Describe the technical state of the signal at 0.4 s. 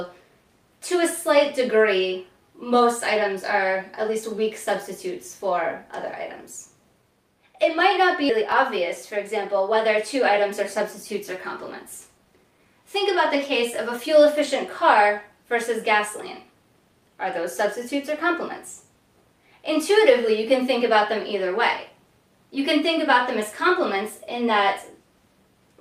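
Nothing is wrong with the signal at 0.4 s; the audio is intact at that moment.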